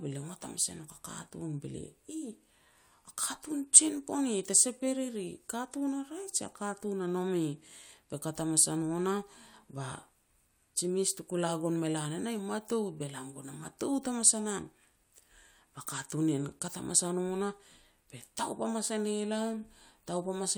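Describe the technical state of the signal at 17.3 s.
At 17.3 s the speech signal is intact, with no technical fault audible at that moment.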